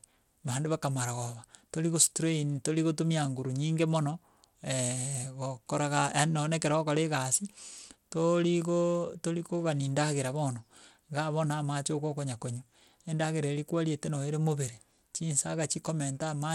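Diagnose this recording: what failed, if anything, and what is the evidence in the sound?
The codec stage is the likely failure: the audio sounds as though it went through Bluetooth SBC compression with a starved bit pool, and the damage is plainly audible across the whole speech recording. With so few bits, the upper sub-bands lose their allocation, so the treble thins and flickers in and out while a gritty, grainy texture and aliasing sit on the voice. That degree of damage fits a low bitrate of around 96 kbps.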